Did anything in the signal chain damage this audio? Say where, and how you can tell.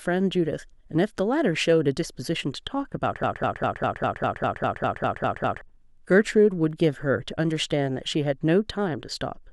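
Yes. From 3.23 to 5.61 s a 0.2 s fragment of speech repeats exactly, back to back, twelve times, like a broken-record loop, and the speech that belonged there never arrives. That points to the playback or stream buffer, which likely stalled and kept resending its last fragment.

Between 6.44 and 6.84 s there are four sharp clicks, each less than a millisecond long: CD scratch ticks. This is a storage and playback fault. Damage on the disc exceeded what error correction could rebuild, so the player concealed the lost samples briefly on each pass.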